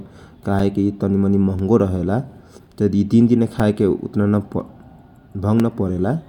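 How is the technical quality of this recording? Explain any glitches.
The recording has one recurring glitch. Periodic USB or driver dropouts: from 0.59 s to 5.6 s, every 1.0 s, a few milliseconds of speech are blocked and replaced with silence. The result is ticks, evenly spaced rather than random.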